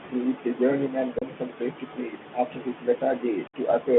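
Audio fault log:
throughout, Bluetooth CVSD headset codec: speech confined to roughly 200 Hz–3.5 kHz, with granular hiss and scratchy sibilants as the one-bit delta steps lag loud high sounds, fitting a 64 kbps link.
1.19–1.25 s and 3.47–3.56 s, unconcealed Bluetooth headset packet loss: abrupt holes of 30 ms, then 64 ms, where several, then about fifteen, voice packets were lost and replaced by silence or an idle pattern.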